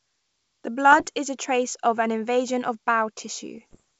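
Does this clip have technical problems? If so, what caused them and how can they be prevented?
Yes: bit errors on an ADPCM link flipped bits that derailed the decoder's step size and predictor, giving rough popping bursts at 0.91–1.07 s, just before "is a trace of", and at 3.55–3.80 s. Stronger error protection, or a cleaner radio or transmission path, would prevent this.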